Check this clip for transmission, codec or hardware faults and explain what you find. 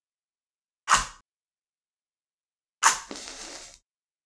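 No faults found; nothing to report.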